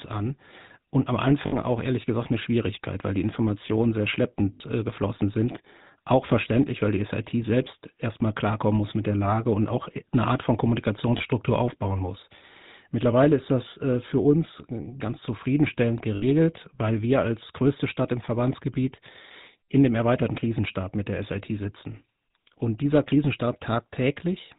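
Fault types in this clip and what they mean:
GSM full-rate codec: Throughout, the speech has a plainly audible buzzy, gravelly roughness, and nothing above 4 kHz comes through. This fits the 13 kbps GSM full-rate codec, which models the vocal tract as a filter and drives it with a regular pulse train that keeps only every third excitation sample. That coarse excitation gives the grainy buzz, and the narrow passband gives the muffled top.
Lost GSM frames: At 1.46, 4.54, 11.18 and 16.16 s, the speech briefly freezes into a rough, metallic ring. The events at 1.46, 4.54 and 16.16 s last about 60 ms, which fits three lost 20 ms frames. The one at 11.18 s lasts about 20 ms, a single frame. Each bad frame was replaced by repeating the last good frame's settings. All four gaps are far shorter than the third of a second after which the concealment would mute to silence.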